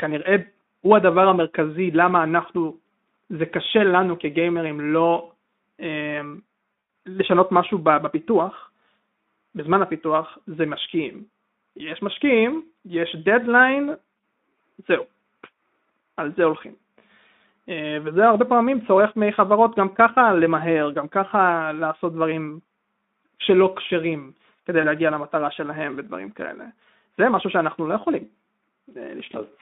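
From 6.73 to 6.93 s, VoIP packet loss is concealed by the speech codec. About 140 ms is lost across 200 ms, with the longest gap 100 ms. The decoder repeats its last pitch and filter at falling gain, so the speech smears into a fading buzzy tone or coloured noise, then recovers weakly. The same happens from 24.81 to 24.87 s, with 20 ms lost. The codec underneath is Speex, with a band of 200 Hz to 3.6 kHz, which fits a setting near 15 kbps, and lightly coloured speech.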